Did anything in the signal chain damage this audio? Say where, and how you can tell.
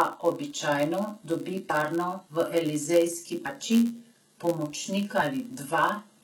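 Yes. At the codec stage, the sibilants sound gritty and lispy throughout, with heavy codec damage. This is likely HE-AAC compression at a very low bitrate, around 16 kbps, where the treble is synthesized from lower bands rather than coded.

At the driver or buffer stage, a steady 91.5 Hz buzz runs throughout. This is a block size mismatch (padded): each block arrives short and is zero-filled to the reader's size, so a gap recurs at the block rate and playback slows to 0.996 times normal speed.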